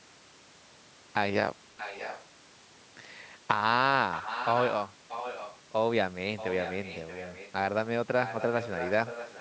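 Echo leak at 1.77–2.25 s, 4.12–4.75 s, 5.09–5.58 s, 6.36–7.52 s and 8.23 s to the end: a fainter copy of the speech trails it by about 627 ms, roughly 10 dB down, and quieter still, near 15 dB down, in the fourth stretch. The likely cause is a loudspeaker on the far end whose echo canceller let part of its microphone pickup slip through and sent it back into the call.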